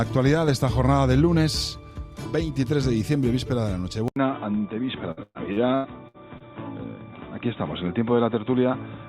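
At 4.08 s the input switched to a poorer device, most likely to another microphone or a headset's call profile. The sound drops out for about 80 ms, then returns dull and boxy, with nothing above 3.8 kHz, because the new path passes a much narrower band. The level stays about the same, but a faint new background noise, far below the signal, stays under the sound until the clip ends.

From 5.11 s to 6.50 s, repeated packet loss gives the sound a choppy, robotic edge. Audio kept failing to arrive, and each hole was patched by extending the sound that came just before it. There are six gaps in this stretch. About 391 ms, roughly 30% of the span, is filled in this way and about 300 ms is missing outright. The longest gap is 120 ms.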